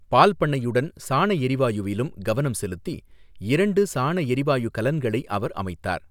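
No technical faults turn up anywhere in this speech recording, with the signal holding steady from its opening moment to its close.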